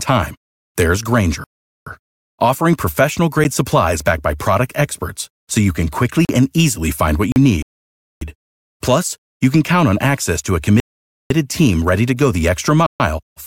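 At 1.44 s, right after "time there's", the speech drops out for 425 ms and resumes at "offering professional", a clean pause followed by a pickup, the mark of a Bluetooth stall. The same kind of dropout returns at 7.62 to 8.21 s, 10.8 to 11.3 s and, after "team ready to go", at 12.86 to 13.0 s. The likely cause is radio interference delaying packets until the headphones' buffer emptied and playback waited for the retransmissions.

A short tick at 3.44 s marks a 10 ms block of digital silence. Two 40 ms holes follow, at 6.25 to 6.29 s and at 7.32 to 7.36 s just after "and easily find what". Each cuts out and back with no fade because samples were zeroed abruptly, as happens when the output buffer isn't filled in time.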